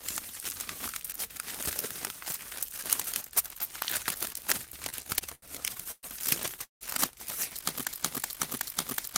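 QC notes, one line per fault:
4.89–6.05 s, repeated stalls (stutter): The sound drags and catches eight times. Each gap is filled by stretching the last sound, the longest for 116 ms. About a quarter of this span is filler. Packets arrived late, and the jitter buffer kept emptying. Nothing is lost.
6.64–6.83 s, call audio freeze: The sound holds, fades, then goes silent for 130 ms before resuming where it stopped. A 169 ms gap is added and nothing is skipped. The likely cause is packets held up in transit, which emptied the jitter buffer.
7.91–9.18 s, system hang loop: One 372 ms piece of sound repeats exactly five times, at 2.69 Hz, until the end. This gives a skipping-record effect. It fits a 16384-sample ring buffer replaying while the system froze. About two seconds of audio are gone.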